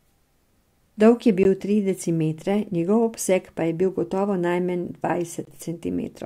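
A gap between stream segments hits this speech clip at 1.43 s, just before "tri decimetre njegov obseg", and again from 5.45 to 5.47 s. Each is a hard-edged hole of silence, about 18 ms and 21 ms long, where the time stamps of adjacent 1 s segments don't quite meet and the player pads the difference with silence. The speech on either side is intact; nothing is lost, only time is inserted.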